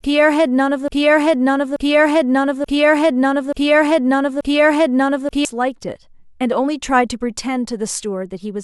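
From 0.88 to 5.45 s, a broken-record loop repeats a 0.88 s speech fragment five times, likely a stalled stream; waveform and spectrogram show identical blocks.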